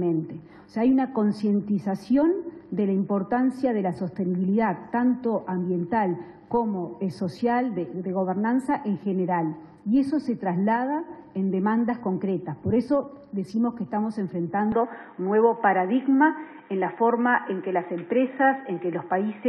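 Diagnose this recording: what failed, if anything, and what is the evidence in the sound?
At 14.72 s the sound abruptly turns dull and boxy and stays that way to the end, with no gap and no obvious jump in level. On a spectrogram, energy above 3.8 kHz vanishes at that instant while the waveform envelope continues unbroken. A faint new noise floor also appears, well below the signal. This points to the capture stage, most likely an input switched to a poorer device whose narrower passband cuts off everything above that limit.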